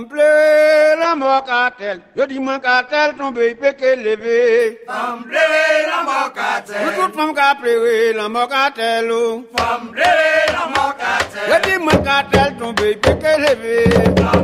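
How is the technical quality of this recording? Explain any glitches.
The recording has one clear glitch, a call bitrate drop, from 1.04 s to about 4.65 s. The connection's bandwidth estimate fell, so the encoder had far fewer bits to work with. It coded the sound more coarsely and narrowed the band. The top end falls from about 20 kHz to 8 kHz, which fits a drop from roughly 64 kbps to 14 kbps. For about 3.5 s the audio sounds muffled, rough and watery. Then full quality returns.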